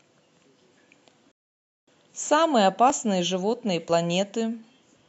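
At 0.92 s the speech jumps slightly ahead, likely a dropped buffer (overrun): the samples were overwritten before the program collected them, so about 10 ms vanished and the two edges were butted together with no gap. From 1.32 to 1.88 s the sound cuts to silence and then resumes exactly where it stopped. This is a rebuffering stall: the player ran out of downloaded audio and waited for more, adding 0.56 s without losing anything. The same skip returns at 2.90 s, with about 10 ms gone, and at 3.89 s, where roughly 20 ms is missing.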